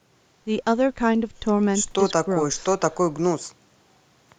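Nothing is technically wrong with this speech recording.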